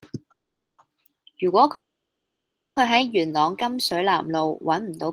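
At 0.31 s the speech stops and the last sound is drawn out into a brief fading buzz, then near silence until 0.80 s. The same happens from 1.74 to 2.78 s, a gap of about one second. Each time the speech picks up exactly where it left off, with nothing skipped, only delayed. This is a call audio freeze, likely from held-up packets draining the jitter buffer. On a waveform and spectrogram, both gaps appear as a short smeared tail followed by an almost empty band.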